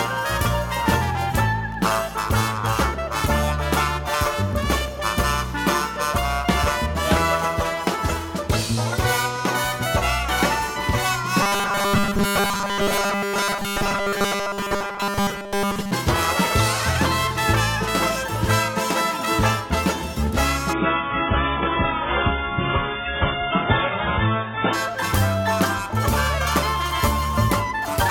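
Robotic sound from repeated short buffers, 11.43 to 15.91 s: most of the time, a 5 ms slice was likely replayed instead of fresh audio, imposing a rigid, metallic 200 Hz buzz. Adaptive stream at a lower bitrate, 20.73 to 24.73 s: quality drops abruptly without a gap, with thicker codec artefacts, which fits a switch to a very low-bitrate AAC stream.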